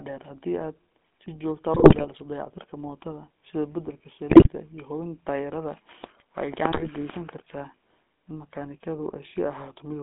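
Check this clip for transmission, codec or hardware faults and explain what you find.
Two faults are present in the speech: GSM full-rate codec coding throughout, and three bursts of GSM bit errors.

GSM full-rate codec, throughout: the vocal tract is modelled and driven by sparse regular pulses, within a 200 Hz to 3.5 kHz band, giving buzzy, gravelly roughness consistent with a 13 kbps coder.

GSM bit errors, at 1.74 to 2.05 s, 4.30 to 4.49 s and 6.70 to 6.89 s: corrupted filter, pitch and gain values distort frames, producing squawks, pops and gargling.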